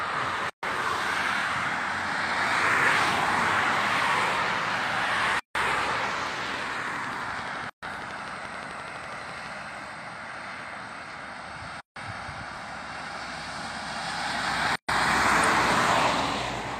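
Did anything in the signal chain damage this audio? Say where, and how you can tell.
Yes. Gaps at a join of encoded pieces, at 0.50, 5.39, 7.70, 11.80 and 14.76 s, are 130 to 160 ms silences where separately encoded segments were concatenated with their encoder delay and padding left untrimmed.

A train of clicks from 5.04 to 9.47 s brings about fifty regular pulses at 11.8 per second, about 10 dB above the signal. The likely cause is interference, a faulty connection or a faulty power supply in the analogue chain.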